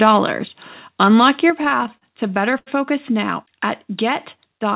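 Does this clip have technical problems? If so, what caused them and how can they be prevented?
Yes. The likely cause of the first problem is an input gain set too high, which drove the microphone into overload. Peaks run about 2 dB past the converter's limit from 0.02 to 0.16 s and from 1.02 to 1.28 s. Around one percent of samples are flattened, giving those loud syllables a harsh, crackly edge. Lowering the input gain until peaks sit a few decibels below full scale prevents it.

The call software then likely reacted to that clipping by turning the microphone volume down in one step. At 1.5 s the level of the voice and the background drops abruptly by about 6 dB. Setting a sensible input level from the start means the automatic gain control has no overload to correct.

In the repeated stalls (stutter), packets arrived late or too slowly and the jitter buffer kept running dry from 1.62 to 2.68 s, ending just before "now at". 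Each time, the receiver stretched the last sound to fill the wait, with the longest wait about 80 ms. Nothing is lost, but about a fifth of that stretch is filler, so the audio drags and hiccups. A steadier network path or a deeper jitter buffer prevents it.

The call path's sound itself is narrowband, with nothing above 4 kHz, which fits the G.711 mu-law codec.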